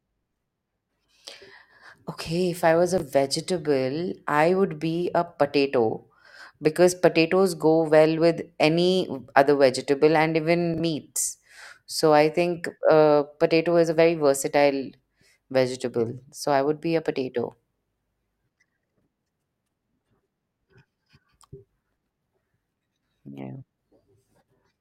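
Chunks out of order at 2.98 to 3.02 s and 10.74 to 10.80 s: a 20 ms block of the speech plays after the block that should follow it, consistent with a one-chunk delay first, then about two chunks. Each spot sounds briefly jumbled.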